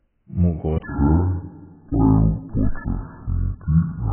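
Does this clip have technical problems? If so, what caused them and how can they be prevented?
Yes, there are two problems. The whole clip is dull and smeared, with a warbly, fizzy edge on the sibilants. That's likely heavy AAC compression. At a very low bitrate, something around 9 kbps, the encoder discards most of the spectrum and quantises what's left so coarsely that the detail turns to swirl. Encoding speech at 32 kbps or more, or using a codec built for low-rate speech like Opus, would prevent it.

From 0.83 s through to the end, the speech suddenly drops deep and drags. It's running at 0.56 times its proper speed, which pulls the pitch down by about ten semitones, so it sounds slow and low together. That's likely a section at the wrong speed, where part of the audio got played back against the wrong clock or sample rate. Keeping sample rates consistent across the editing and playback chain would prevent it.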